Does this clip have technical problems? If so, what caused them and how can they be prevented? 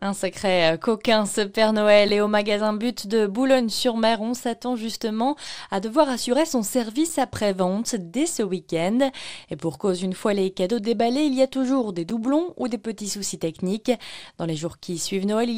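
Yes. A gap between chunks occurs at 2.08 s and 12.10 s: about 7 ms of silence at chunk joins, consistent with 5-second chunks, briefly interrupting the sound. Prevent it by concatenating chunks sample-accurately, trimming codec padding and scheduling playback gaplessly.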